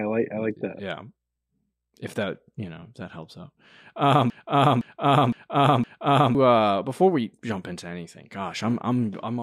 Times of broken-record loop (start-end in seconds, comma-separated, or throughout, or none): 4.30-6.35